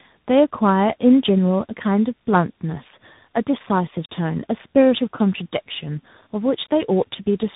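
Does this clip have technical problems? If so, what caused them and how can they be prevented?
Yes. Tandem speech coding affects the whole clip. The speech went through AMR-NB at 7.4 kbit/s, then G.711 A-law, and was then coded again by CVSD at 64 kbit/s. CVSD re-coded the errors AMR-NB had already introduced, so the speech sounds rough, muffled and warbly, with nothing above 3.8 kHz. To prevent it, keep a single codec end to end, using transcoder-free operation or passing the original bitstream across network borders.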